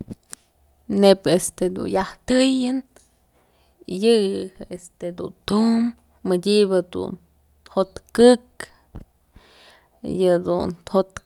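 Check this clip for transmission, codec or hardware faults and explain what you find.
No transmission, codec or hardware faults are audible anywhere in the speech.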